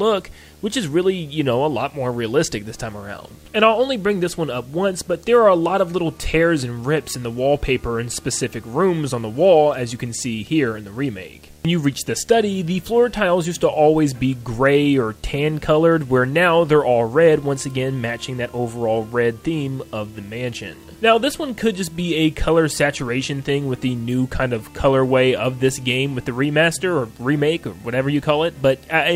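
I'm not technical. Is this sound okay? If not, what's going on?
No, not quite. There's a video or display buzz running under the whole recording, start to finish. A nearby screen or video cable has leaked into the audio, so you hear a steady buzz that repeats 75 times a second, matching how often the picture refreshes, with a gritty hash on top. It sits well below the main sound.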